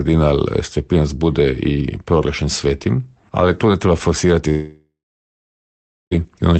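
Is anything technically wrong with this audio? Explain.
Yes. From 4.49 s to 6.13 s the sound smears into a fading buzz, then drops to about 1.2 s of near-silence before resuming with 1.6 s missing. This is likely a long network dropout: packets stopped arriving, and the receiver stretched the last audio until it gave out.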